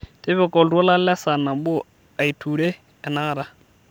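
A speech clip with crude rate conversion from 1.58 s to the end at 3.90 s: a gritty, inharmonic fizz rides on the louder and brighter sounds, about 30 dB below the speech. It fits a 48 kHz to 44.1 kHz change by nearest-sample dropping, without filtering.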